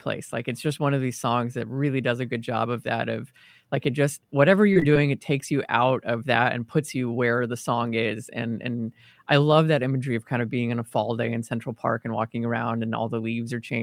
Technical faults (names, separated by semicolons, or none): scattered short gaps